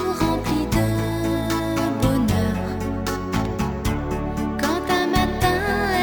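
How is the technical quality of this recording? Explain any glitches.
One glitch stands out: loose connector crackle from 3.32 to 3.47 s. For roughly 0.15 s a worn or dirty contact makes and breaks, chopping the signal and adding pops from any DC on the line. It sounds like irregular scratchy crackle, unlike a single clean digital click or an evenly spaced dropout pattern.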